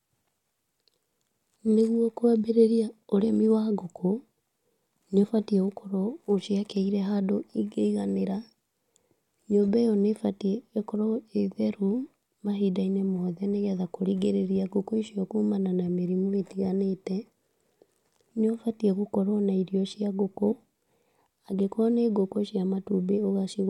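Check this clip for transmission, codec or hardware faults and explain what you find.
One transmission fault is audible in this speech clip. Compressed frames are skipped at 5.20–5.25 s: missing or rejected frames drop about 20 ms of audio, so the speech jumps ahead by that much.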